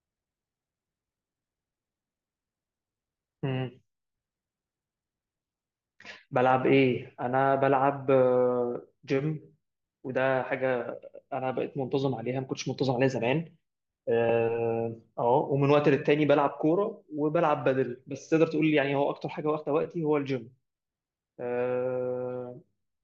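Nothing in the recording stood out as a technical problem on listening.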